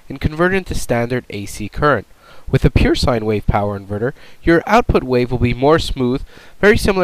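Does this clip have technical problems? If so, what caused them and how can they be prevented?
Yes. DAB burbling occurs from 4.97 to 5.07 s. Weak reception let bit errors slip past the error correction into the MP2 data. Corrupted samples and scale factors make single sub-bands jump briefly, producing short blips of noise. A better antenna position or stronger signal prevents it.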